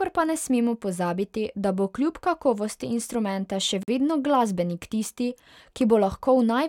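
Separately encoded pieces were joined without trimming encoder delay and end padding, leaving a gap at a join of encoded pieces: at 3.83 s, after "kljub kakovosti instrumenta še", the speech drops out for 48 ms with smeared edges, resuming where it stopped on "vedno glasbenik tisti".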